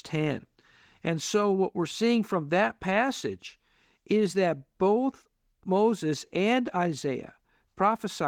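Nothing in the recording stood out as a problem on listening.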